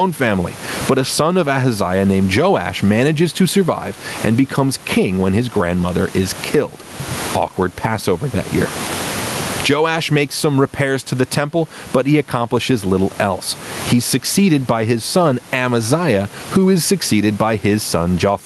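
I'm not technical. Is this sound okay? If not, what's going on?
No. Gain pumping runs through the whole clip. Loud and soft parts end up closer in level, so the speech sounds squashed and flat. The likely cause is microphone gain set far too high, with an automatic limiter repeatedly pulling it back down.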